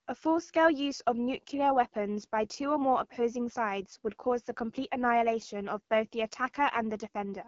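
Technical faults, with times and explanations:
Throughout, AMR wideband (HD Voice) codec: the speech passed through a low-rate AMR-WB mode, which fits about 8.85 kbit/s, and the pulse-driven vocal tract model cannot follow it closely, so the speech sounds plainly rough and raspy, with no content above 7.5 kHz.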